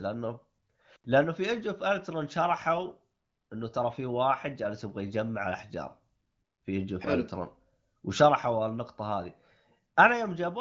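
Speech, with no technical faults to report. It has passed through an AMR wideband (HD Voice) codec, which shows as nothing above 7.6 kHz and only light coding character, consistent with a rate of around 15.85 kbit/s.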